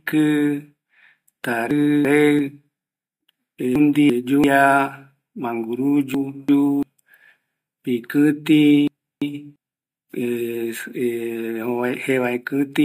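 Speech with chunks out of order at 1.71–2.39, 3.76–4.44, 6.14–6.83 and 8.88–9.56 s. In each, a 341 ms chunk arrives one chunk late and plays after its successor, so the sound jumbles briefly, with three hard joins.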